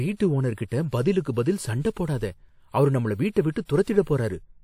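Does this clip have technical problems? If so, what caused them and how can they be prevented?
Yes. There is pre-echo at about 3.32 to 3.36 s, right after "அவரு நம்மள". For roughly 38 ms a short hiss runs ahead of a sharp attack in the speech, and the attack itself sounds smeared. A transform codec spread its quantisation noise across a whole block. The loud onset fell late in that block, so noise sized for it also filled the quiet gap before it. Prevention: use a codec or bitrate with block switching, so short windows are used around attacks.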